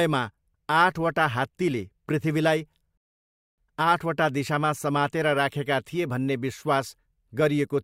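At 2.97 s the speech just stops dead and sits in silence until 3.58 s, then picks up exactly where it left off. That's a rebuffering stall: the player ran dry of downloaded audio and waited for more, so nothing's missing, just about 0.6 s of dead air added.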